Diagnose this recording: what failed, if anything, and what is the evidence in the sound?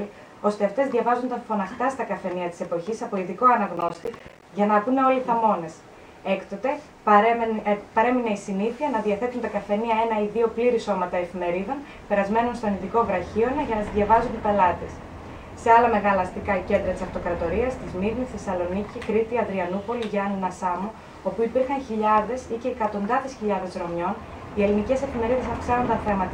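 Processor overload crackle, 3.77 to 4.42 s: a gritty burst of short silent dropouts in the driver/buffer stage, which fits around fifteen missed buffers of roughly 10 ms each.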